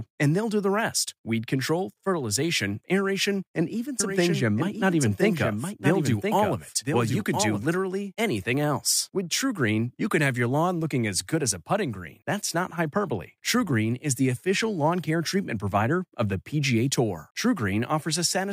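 From 4.00 s, just after "fertilization aeration and even", the speech is joined by a somewhat quieter, dry copy trailing about a second behind, which stops abruptly at 7.66 s before "anything else". This doubled audio track likely comes from capturing the speech twice through paths with different delays.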